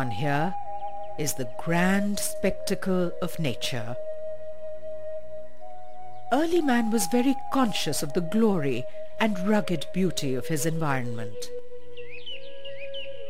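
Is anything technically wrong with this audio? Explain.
Yes. There are two faults.

DC offset runs through the whole clip. The waveform sits shifted away from zero by a constant amount. You cannot hear the shift itself. It does use up headroom, since one side of the waveform reaches the ceiling sooner than the other. On a spectrum it shows as steady energy at the very bottom, near 0 Hz. Removing it takes only a high-pass filter or subtracting the mean.

Clock slip clicks run from about 0.13 s to 13.29 s. They are regular ticks, roughly twenty a second, some two hundred in all. The likely cause is two devices running on separate clocks with nothing syncing them. Each time their difference builds to one whole sample, a single sample is dropped or repeated. The spacing fits a clock error of around 400 parts per million. The ticks drop out wherever the sound goes silent.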